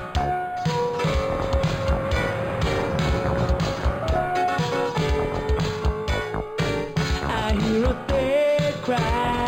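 Throughout the clip there is imaging from linear upsampling, consistent with audio at about 11 kHz raised to 48 kHz by straight-line interpolation. The top is dulled, and a faint mirror image sits between 5.5 and 11 kHz, roughly 30 dB down, adding light metallic shimmer.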